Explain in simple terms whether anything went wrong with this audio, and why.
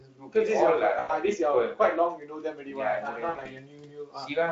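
Parts of the speech sound swallowed or faint, from 0.01 to 0.35 s, 2.17 to 2.79 s and 3.12 to 4.37 s. This is speech cut by the noise suppressor: the filter meant to remove background hiss mistook quieter bits of speech for noise and turned them down too.

At 0.99 to 1.12 s, and again in scattered bursts between 3.29 and 3.49 s, the sound smears into a buzzy, fading tone. That is VoIP packet loss concealed by the speech codec: pieces of the call went missing, about 100 ms each time, and the decoder guessed to fill the gaps.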